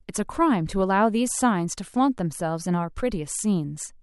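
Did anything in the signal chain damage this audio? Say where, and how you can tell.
No, nothing in the signal chain has damaged this speech. I can't point to any stage, from the wiring through to playback, that leaves an audible mark on it.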